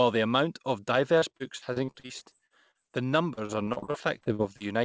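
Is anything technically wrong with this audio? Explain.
Yes. The speech suffers repeated packet loss (robotic sound) in two stretches, from 1.19 to 2.93 s and from 3.35 to 4.63 s. In each stretch, short holes up to about 36 ms long arrive one after another. The receiver fills each hole by stretching the last bit of sound, and about a quarter of each span is filled this way. The result is a choppy, robotic quality. Unlike a single dropout, the gaps are filled rather than silent and keep recurring, all within the call path's 8 kHz bandwidth.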